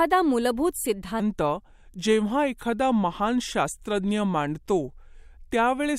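A section at the wrong speed runs from 1.20 s to the end of the speech. From that point the audio plays at about 0.83 times its recorded rate, so pitch and pace drop together: the voice sinks by roughly three semitones and stretches out, sounding heavier and more sluggish than the opening second. The shift arrives abruptly and holds steady, most likely because that stretch was played back or edited against the wrong clock.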